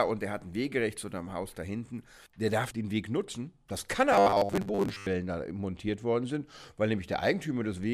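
From 4.13 to 5.07 s the sound collapses into a rigid, metallic buzz at 100 Hz: robotic sound from repeated short buffers. The likely cause is new audio arriving too seldom, so a 10 ms slice is replayed over and over across most of that stretch while the real audio is skipped. Unlike steady mains hum, the buzz still loosely follows the shape of the sound.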